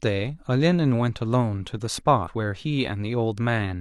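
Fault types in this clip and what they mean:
Compressed frames skipped: Whole frames of the coded speech never reach the output, because they were lost or rejected as damaged. Playback simply jumps forward. At 0.33 s roughly 50 ms vanishes, about one frame. At 2.23 s roughly 150 ms goes, about three frames. Both gaps fit a frame length near 46 ms.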